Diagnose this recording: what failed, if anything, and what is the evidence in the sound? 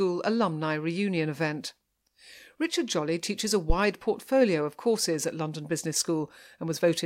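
There's a phantom power thump at 3.70 to 3.75 s in the analogue input: supply switching pushed a low step through the coupling capacitors, peaking about -11 dBFS and decaying within 12 ms.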